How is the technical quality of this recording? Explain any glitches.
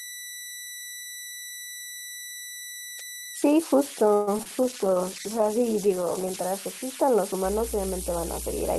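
The quality is rough: a whistle runs the whole way through, and the middle and end have call-transmission glitches plus hum.

The converter idle tones sit under everything, a thin whistle at about 2 kHz roughly 12 dB below the speech. An undithered delta-sigma converter falls into repeating bit patterns on quiet input, so you hear a whine in pauses and grain under soft passages.

From 4.13 to 4.29 s there's a call audio freeze: the sound stretches into a fading buzz for about 136 ms, then carries on where it left off. Nothing's lost, but the timing slips. Most likely packets stalled and the jitter buffer ran dry.

Right after, at 4.37 to 4.48 s and again at 4.43 to 4.47 s, there's short concealed packet loss. About 20 ms went missing each time, and the decoder papered over it by extending the last sound, leaving a quick smear or wobble in the speech.

From 4.64 to 6.44 s a call bitrate drop takes Opus from 32 down to 12 kbps, bottoming out for about 1.7 s. 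With that few bits the coding gets coarse and the top end is trimmed, so the speech turns watery and muffled until it recovers.

From 7.42 s to the end, mains hum comes in: a steady 60 Hz drone with low harmonics, roughly 10 dB under the speech. That points to a ground loop or a transformer coupling the power line into the signal.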